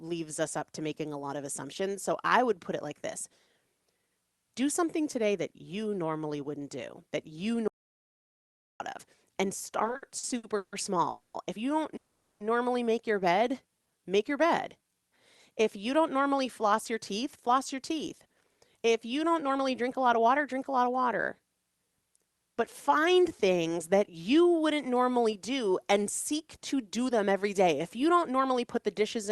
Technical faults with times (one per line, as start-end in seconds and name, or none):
7.68-8.80 audio dropout to silence
9.79-10.74 repeated stalls (stutter)
11.10-11.36 call audio freeze
11.96-12.42 call audio freeze
13.39-15.02 jitter buffer slow-down
16.65-19.89 jitter buffer speed-up
22.89-25.05 jitter buffer slow-down
26.57-29.30 jitter buffer speed-up